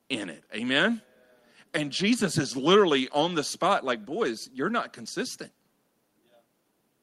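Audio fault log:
Nothing stood out on listening to the speech in this clip.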